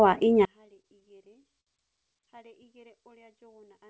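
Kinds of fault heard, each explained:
One channel inverted: From 0.45 s to the end, the mono sum of the speech drops by about 36 dB and only a faint residue is left. That's most likely one stereo channel with flipped polarity, so the shared centre content cancels when the two channels are added.
Repeated stalls (stutter): Between 0.66 and 1.69 s the speech hitches eleven times. The jitter buffer kept running dry and the last sound was stretched to cover about 167 ms in all, roughly 16% of that stretch, with the longest hold 59 ms. Nothing is actually lost, but the delivery drags.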